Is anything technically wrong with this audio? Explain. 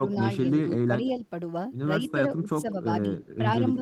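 Yes, two echo-canceller faults. Speech suppressed in double talk occurs at 0.0–0.2, 0.85–0.94, 1.99–2.18, 2.42–2.86 and 3.58–3.63 s. The speech dips by roughly 5 to 10 dB in brief pieces, likely because the canceller turned down both sides while they overlapped. It is a loss of level, with nothing added.

Echo leak occurs at 2.07–2.12 and 3.21–3.27 s. A faint copy of the voice repeats about 170 ms later, some 15 to 25 dB quieter. This is likely loudspeaker pickup that the canceller failed to remove. Unlike the suppression, this fault adds sound.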